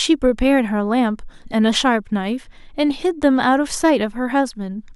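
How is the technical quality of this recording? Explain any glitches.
No glitches or technical faults can be heard anywhere in the recording.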